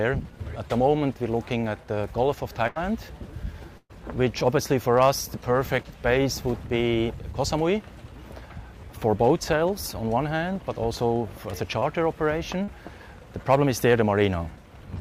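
At 2.67 to 2.78 s and again at 3.78 to 3.91 s, the sound stretches and fades, then jumps ahead. This is a burst of packet loss: about 80 ms and then 120 ms went missing, and the receiver extended the last sound to cover the gap. The second gap ends in about 30 ms of silence. Brief smears at 11.79 to 11.83 s and 12.63 to 12.69 s come from short concealed packet loss, where roughly 20 ms and 40 ms were filled in before the audio rejoined.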